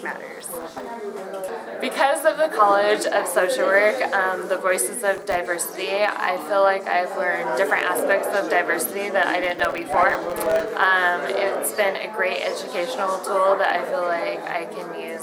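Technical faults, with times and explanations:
0.40–0.96 s, 5.15–5.46 s and 9.44–10.71 s, processor overload crackle: each burst is a gritty, tearing crackle laid over the sound, and the last one is the longest. The processor repeatedly failed to deliver its audio buffers on time, and each missed deadline left a tiny hole of silence with hard edges. The rapid clicks fit very short buffers, under a millisecond each, and roughly 30, 20 and 70 of them drop out in the three bursts.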